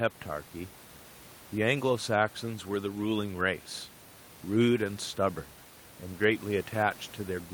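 No technical faults are audible in this speech recording; the only background is the room noise picked up at the microphone, sitting about 25 dB below the speech.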